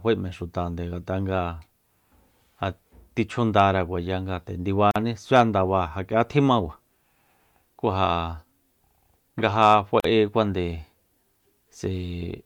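Separately encoded pieces were joined untrimmed, leaving encoder delay and padding: a gap at a join of encoded pieces opens after "chjundara kuaya nga nde" at 4.91 s (45 ms) and again at 10.00 s (43 ms), a silence with smeared edges before the speech resumes.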